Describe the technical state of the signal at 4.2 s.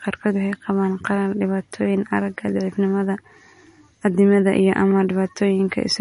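At 4.2 s, as across the whole clip, the speech shows MP3 compression, likely at a low bitrate around 40 kbps. Starved of bits, the encoder removed everything above 10.6 kHz and dropped weak spectral detail, leaving a dull, watery, swirling quality.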